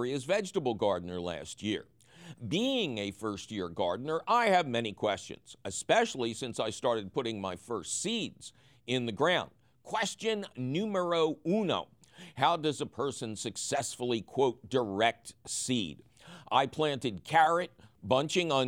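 A listener hears no technical fault anywhere in this speech recording, and the signal stays stable and intact throughout.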